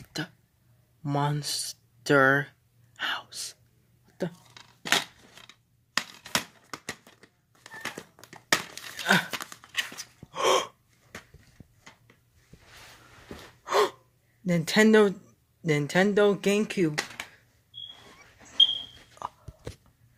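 No technical faults can be heard anywhere in this audio.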